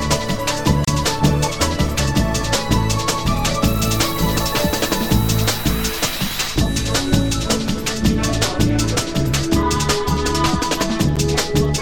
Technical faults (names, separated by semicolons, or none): gap at a join of encoded pieces